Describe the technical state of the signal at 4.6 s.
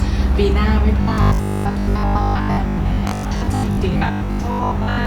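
At 4.6 s you're inside the robotic sound from repeated short buffers, running 1.01 to 5.05 s: a rigid 50 Hz buzz, likely from most of the audio being replaced by a looped 20 ms chunk.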